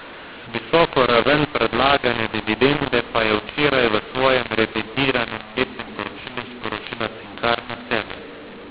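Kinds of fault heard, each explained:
mu-law and A-law mixed up: A-law telephone speech is decoded as mu-law throughout, which scrambles the levels, so it sounds harsh and distorted and pauses fill with noise.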